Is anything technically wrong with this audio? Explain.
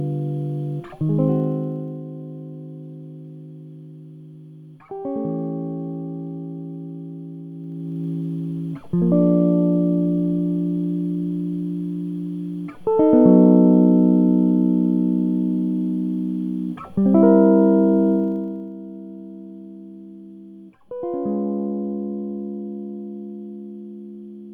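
Yes. Zipper noise occurs at 1.24–2.04 s, 7.52–8.08 s and 18.12–18.72 s, where the music's level drops roughly 10 dB, rises roughly 10 dB, then drops roughly 15 dB in unsmoothed 1 dB jumps, around 30 a second. Each jump clicks, producing a fast ticking over the music.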